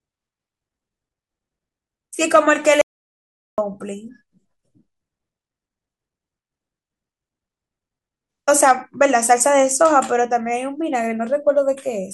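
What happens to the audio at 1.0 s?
Nothing goes wrong at 1.0 s; the speech plays through that moment intact, with no dropout, click, distortion or other fault.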